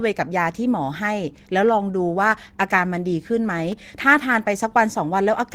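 Speech, with one fault. A short burst of loose connector crackle breaks in at 3.72 s and lasts until 3.78 s, about 60 ms. It sounds like irregular scratching. A worn or dirty contact is making and breaking as it moves. This chops the signal into rough fragments.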